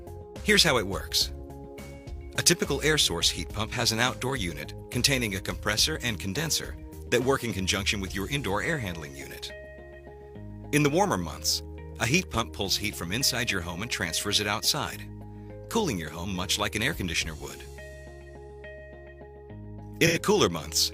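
Near the end, from 20.06 to 20.20 s, AAC frame loss with concealment produces a brief smeared patch as the decoder rebuilds roughly 85 ms from the previous spectrum, consistent with two lost frames.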